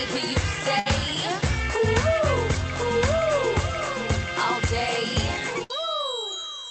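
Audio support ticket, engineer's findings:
Burst of packet loss, twice: 0.79–0.88 s and 5.64–5.71 s. The music smears into a held, fading tail for about 60 ms, then jumps ahead with roughly 60 ms missing. A few packets dropped in a row on the call path, and the receiver's concealment stretched the last sound over the gap.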